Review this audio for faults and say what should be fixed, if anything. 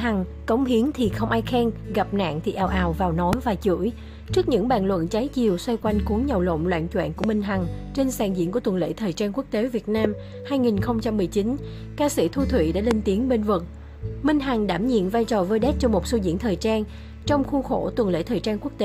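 Four loud pops occur at 3.33–3.35 s, 7.24–7.26 s, 10.05–10.07 s and 12.91–12.93 s. Each is a single sharp click of about 20 ms, peaking roughly 20 dB above the surrounding sound, which continues underneath. The likely cause is a brief voltage pulse from a switch, connector, static or driver glitch entering the signal path. A waveform would show each pop as a tall, narrow spike, and a spectrogram as a thin full-height vertical stripe. Secure connectors, ground equipment properly and keep drivers stable to prevent them.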